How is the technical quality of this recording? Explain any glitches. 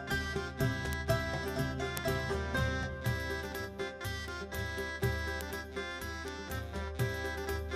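The music has five bit error spikes, at 0.93, 1.97, 4.28, 5.41 and 6.28 s. Each time, a flipped bit throws one sample (two at 6.28 s) to a far-off value that snaps straight back. The result is a sharp, broadband tick unrelated to the music, peaking at about -6 dBFS at 1.97 s, about -12 dBFS at 0.93 and 5.41 s, and about -24 dBFS at 4.28 and 6.28 s.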